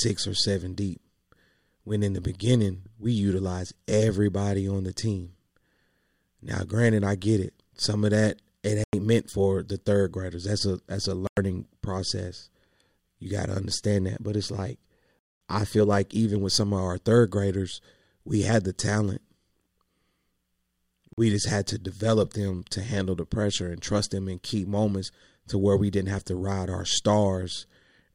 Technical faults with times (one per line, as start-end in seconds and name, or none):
8.84-8.93 Bluetooth stall
11.27-11.37 Bluetooth stall
15.19-15.41 Bluetooth stall
21.13-21.18 Bluetooth stall